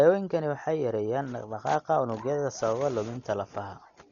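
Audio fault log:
throughout, Dolby Digital compression: dull, band-limited speech with nothing above 7 kHz and rough, fluttering noise; spectrogram shows a hard ceiling and speckled fill, likely from a starved bitrate near 40 kbps.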